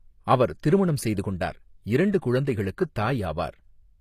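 HE-AAC compression throughout this speech clip: the treble sounds copied upward from lower bands rather than real, so s sounds turn gritty and lispy, likely from a low bitrate near 24 kbps, with nothing above 15 kHz.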